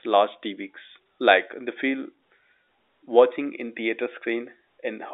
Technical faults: none

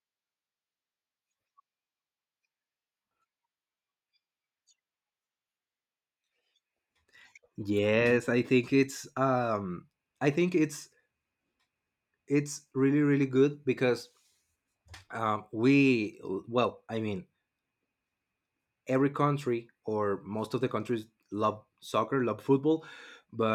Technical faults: none

